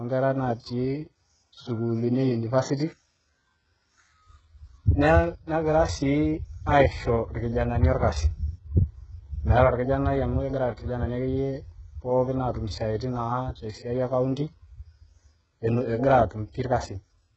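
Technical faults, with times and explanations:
Throughout: HE-AAC compression, likely at a very low bitrate in the region of 8 kbps. The speech has no content at all above about 7.9 kHz. Below that, the treble is there but wrong. The codec keeps only the lower spectrum and fakes the upper part by copying lower bands upward under a coarse envelope. Those copied harmonics do not line up with the real ones. S sounds come out gritty, metallic or lispy. The damage is heavy.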